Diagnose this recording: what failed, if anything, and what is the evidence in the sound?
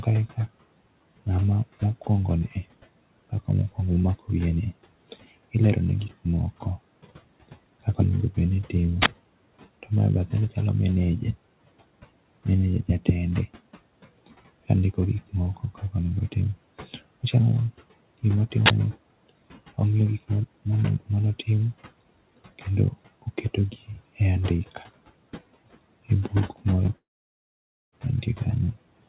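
At the driver or buffer stage, the playback path shows an uninitialised buffer fault twice, at 9.02–9.06 s and again at 18.66–18.70 s. Each is a short, very loud burst of harsh digital noise lasting 40 ms, which fits one whole audio block being sent out before the application wrote any samples into it. The stale memory contents were played as if they were audio, producing the abrupt, unnatural blast.

In the call processing stage, there is speech cut by the noise suppressor in three places: 15.57–15.94 s, 23.72–24.01 s and 24.75–24.84 s. In each, around a tenth of a second of speech sounds swallowed or faint, with the level pulled down by about 11 dB, about 16 dB and about 7 dB respectively. The suppressor misjudged quiet speech energy as background and attenuated it with the room noise.

At the network stage, short concealed packet loss appears at 26.86–26.89 s. Roughly 20 ms of audio failed to arrive in time, and the decoder filled the gap by extending the preceding sound before blending back into the real signal. 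The result is a brief smear or wobble in the speech. With the G.711 path already limiting content to 4 kHz, the repair is short and narrowband.

Also at the network stage, a long network dropout runs from 26.97 to 27.94 s. The last sound is stretched briefly, then decays into near silence for about 0.89 s before speech resumes further along, with the intervening material gone. That pattern of a short fill fading to emptiness, followed by a jump forward, is most likely an interruption in packet delivery of nearly a second rather than a local playback fault.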